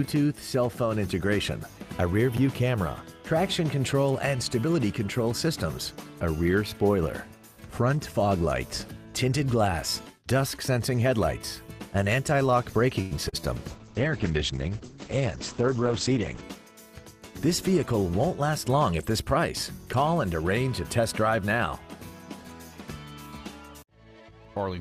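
At 2.34 to 2.38 s, chunks out of order: a 10 ms chunk plays three chunks late, so the sequence is scrambled with hard joins, heard as a brief jumbled moment.

At 13.01 to 13.13 s, a short stall from a late packet: the receiver holds the last sound for 95 ms until the packet arrives, so nothing is lost but playback falls 95 ms behind.

At 13.29 to 13.42 s, short concealed packet loss: 40 ms of audio is missing and is bridged with 34 ms of synthesized continuation, a short smear that adds a little extra time.

From 13.68 to 16.49 s, a call bitrate drop: the audio turns coarse and muffled, with its bandwidth cut from 20 kHz to 8 kHz. This fits an encoder rate falling from about 48 to 9 kbps and staying at its lowest for 2.8 s.

From 15.53 to 16.72 s, overlapping the end of that drop, a jitter buffer speed-up: the receiver trims pitch-period slices, about a tenth of a second in total, so the sound runs at 107% speed with unchanged pitch and feels hurried.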